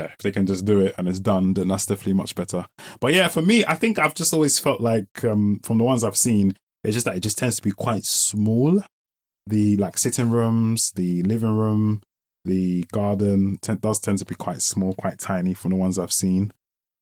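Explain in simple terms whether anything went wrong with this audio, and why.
Nothing went wrong: the speech passes through Opus voice compression at full bandwidth with only light coding damage, and no fault turns up anywhere in the clip.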